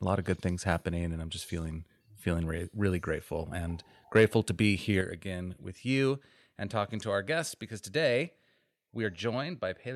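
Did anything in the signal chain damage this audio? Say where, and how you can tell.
Yes. The microphone input gain was likely set too high at the converter, causing microphone overload from 4.16 to 4.25 s, between "really grateful and" and "to be". Peaks run about 2 dB past full scale, clipping a few percent of samples and adding a harsh, crackling edge.

At 5.01 s, between "to be" and "again with", call processing stepped the microphone volume down by about 5 dB, likely reacting to that clipped peak. Voice and background fall together in one sudden step rather than a gradual fade.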